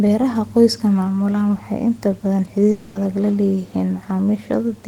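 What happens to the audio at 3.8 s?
Nothing goes wrong at 3.8 s; the audio is intact at that moment.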